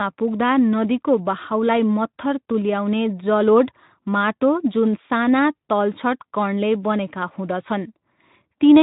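No technical faults turn up in the speech, which carries the light coding texture and the absence of content above about 3.8 kHz that fit a Speex stream at around 15 kbps.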